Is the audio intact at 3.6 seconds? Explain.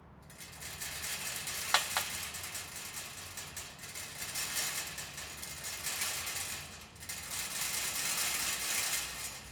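Yes, the sound at 3.6 seconds is intact, with no dropout, click, distortion or other fault at that moment.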